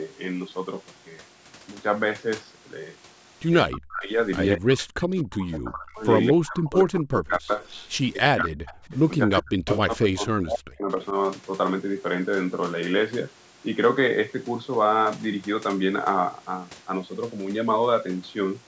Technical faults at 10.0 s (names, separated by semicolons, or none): speech suppressed in double talk